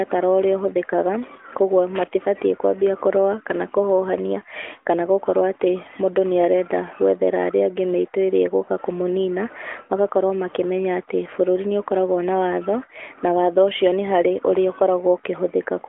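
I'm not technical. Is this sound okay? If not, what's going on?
No. Just under two seconds in, from about 1.95 to 2.08 s, there is a short, rough burst of crackle and scratching, right before "kwambia kũrũa". This is loose connector crackle: a worn or dirty plug or socket briefly loses and regains contact as it shifts, so the sound is chopped into rapid on-off fragments. The speech comes through a mobile phone line, which gives it a thin, narrow telephone tone.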